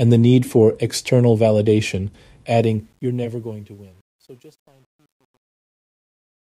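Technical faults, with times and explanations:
2.57–6.42 s, truncation distortion on a fade: after "need for external validation" the fade-out turns gritty, worst from 3.59 s to the end. The fade stage keeps too few bits and adds no dither, which fits about 10-bit resolution.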